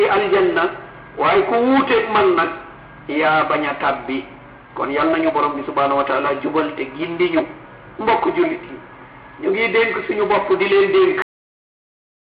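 The audio has a cut-off end: at 11.22 s it just stops dead in the middle of a sound, with no fade or natural decay, and the last second or so through to the finish is flat digital silence. That's what you get when the final buffers never make it to the file or the output, so whatever was playing simply isn't there. The signal doesn't trail off. It gets chopped off at the buffer boundary, and nothing after the cut survives.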